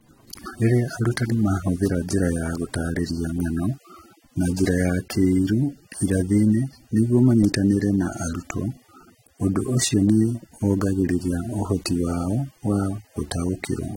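Across the whole clip, smeared, watery detail sits under a hard spectrogram ceiling at 16.6 kHz, likely low-bitrate audio saved at a high bitrate.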